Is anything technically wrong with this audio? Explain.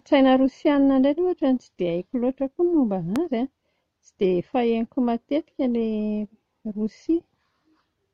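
Yes. At 3.16 to 3.18 s there is a loud pop: a single sharp click that peaks roughly 10 dB above the speech, which carries on underneath it. It was likely caused by a sudden voltage step or pulse, such as a plug, a switch, static or a driver glitch, entering the signal and being shaped by the circuits that followed. On a waveform it is a tall, narrow spike. On a spectrogram it is a thin vertical stripe spanning the full frequency range.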